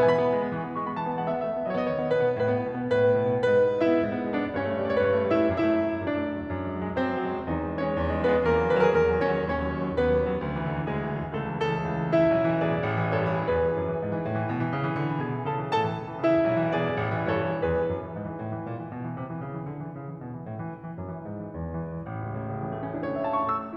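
Music, with no technical faults heard anywhere in the clip.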